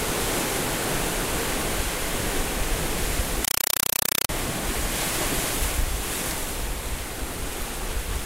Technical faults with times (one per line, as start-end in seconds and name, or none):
3.45-4.29 compressed stream played as audio